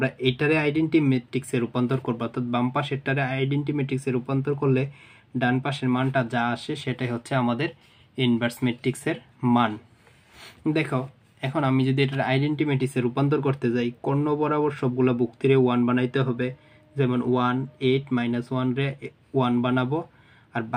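Nothing stood out on listening; no faults could be heard at any point in the audio.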